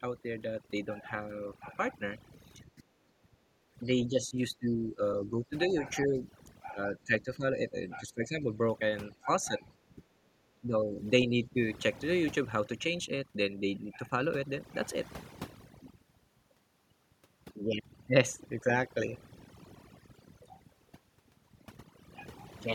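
Across the whole clip the pauses drop away, flecked with twinkling specks. This is overdone noise removal: reduction set too strong pulled individual frequency bands down whenever they sat near the noise estimate, taking quiet parts of the speech with them.

From 2.75 to 2.83 s the speech briefly sinks by roughly 20 dB. Similar dips, losing around 10 to 15 dB, follow at 4.08 to 6.25 s, 6.73 to 8.52 s, 9.2 to 9.64 s, 9.96 to 10.02 s and 10.55 to 11.55 s. This is speech suppressed in double talk, likely an echo canceller that could not separate the near talker from loudspeaker echo and turned both down.

Between 3.11 and 3.75 s the room sound itself drops away by about 14 dB for roughly 0.7 s, then returns. This is background gated by the echo canceller, which clamped the microphone hard while the loudspeaker played and released it afterwards.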